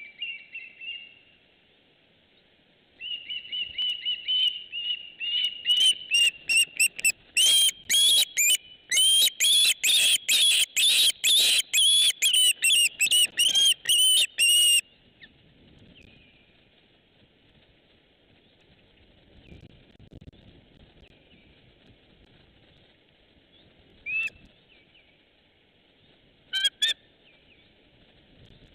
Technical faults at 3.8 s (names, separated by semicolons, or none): overlapping chunks